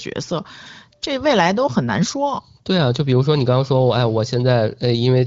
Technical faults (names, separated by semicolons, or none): none